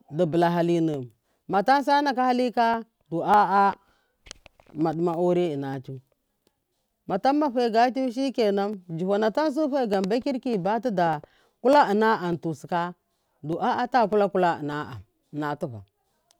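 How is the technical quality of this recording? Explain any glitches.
The recording is held back by one recurring glitch: a click in the speech every 0.6 s, running from about 0.34 s to 15.93 s, around thirty in all. That steady spacing points to clock drift buffer slips. The likely cause is two devices on separate clocks, drifting apart by something like a few hundred parts per million, so the buffer between them gradually fills or drains until a tiny chunk, roughly 15 samples, gets dropped or repeated, and each jump lands as a tick.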